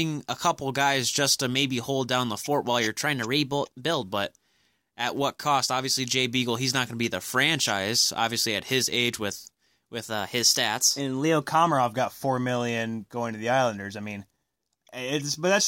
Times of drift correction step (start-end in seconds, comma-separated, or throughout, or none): 3.06-4.03, 10.07-11.42